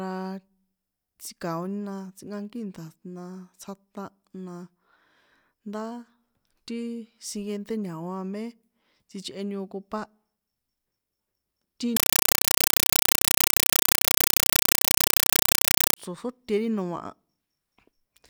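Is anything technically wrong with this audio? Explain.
Yes. From 11.97 s to 15.97 s the speech is replaced by a compressed stream played as audio. A Dolby Digital (AC-3) bitstream appears to have been passed through without decoding and read as ordinary PCM samples. Each coded frame comes out as a 5.33 ms burst of noise, followed by zero padding, repeating at 31.25 Hz. For those four seconds the result is very loud, chattering static.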